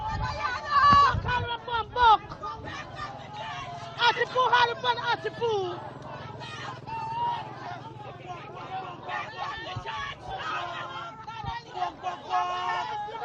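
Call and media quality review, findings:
Brief smeared, phasey patches at 4.15–4.21 s and 10.04–10.10 s. AAC frame loss with concealment: decoder re-synthesised from the previous spectrum for 42.7 ms, fitting one lost frame each.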